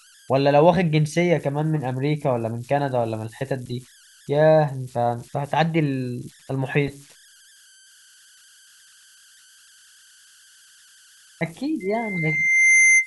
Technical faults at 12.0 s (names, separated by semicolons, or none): converter idle tones; loudspeaker feedback squeal